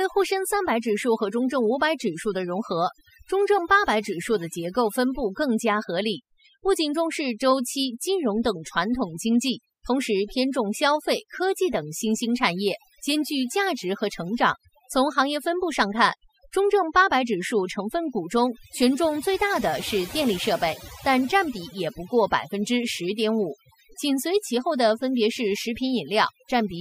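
Overdone noise removal runs through the whole recording: a noise reduction stage set far too aggressively keeps pulling individual frequency bands down whenever they sit near its noise estimate, taking the quieter parts of the speech with them. The background drops away and breaks up into twinkling specks.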